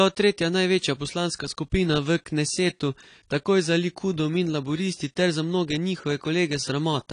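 From start to end the speech carries AAC compression, likely from AAC-LC at a low rate fitting about 32 kbps. Nothing survives above 10.1 kHz, so a spectrogram shows a flat ceiling with patchy upper bands. Sibilants sound dull, smeared and warbling.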